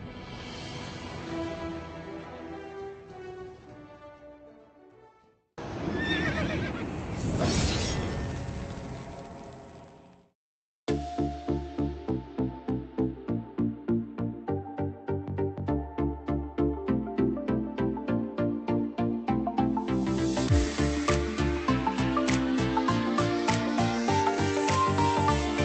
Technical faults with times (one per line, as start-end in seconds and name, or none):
none